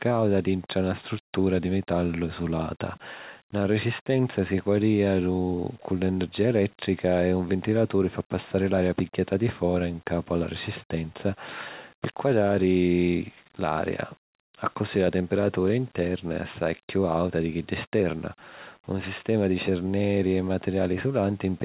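Listening to the speech revealed nothing that stood out as a technical fault at any point.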